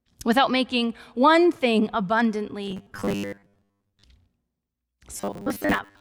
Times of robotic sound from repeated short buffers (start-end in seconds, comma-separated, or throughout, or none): 2.64-4.04, 5.17-6.00